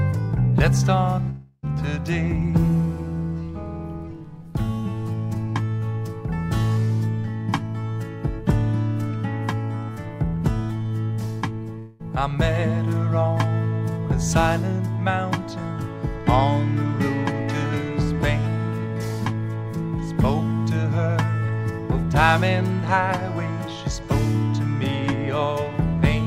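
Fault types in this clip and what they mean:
Long network dropout: at 1.29 s the sound becomes a fading buzz or hiss lasting about a third of a second, with a brief silence before it resumes at 1.65 s. At 11.79 s a 0.2 s fade follows. Audio likely stopped arriving; both stretches are lost.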